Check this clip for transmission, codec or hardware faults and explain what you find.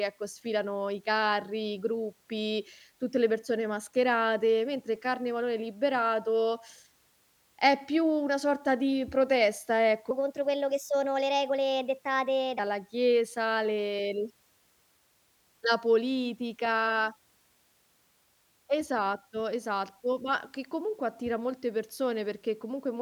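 One fault is present. From 10.11 to 12.59 s, after "una sorta di protesta" and before "chiesa le", the speech turns high and hurried: a section at the wrong speed, about four semitones up, likely from playback running 1.23 times too fast.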